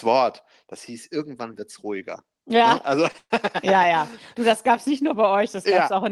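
At 3.11 s, a short stall from a late packet holds the speech for about 28 ms, until 3.17 s. One packet was not ready when playback needed it, so the jitter buffer ran dry and the receiver stretched the last fragment of sound. Nothing is lost, but that instant drags, with a faint buzz. On a spectrogram the harmonics run flat and unchanging for that sliver, and the waveform shows a few near-identical repeated cycles.

From 3.18 s to 3.33 s comes a call audio freeze, likely caused by packets being held up in transit, which emptied the buffer again. The receiver fills about 119 ms: the held sound decays into a fading buzz, then roughly 50 ms of silence before the speech resumes where it stopped. The audio is delayed, not cut. On a spectrogram a smeared, flattened band fades to a blank vertical strip; the waveform tapers to a flat line. Above about 12 kHz the spectrogram stays empty throughout, which fits the Opus call path at around 32 kbps.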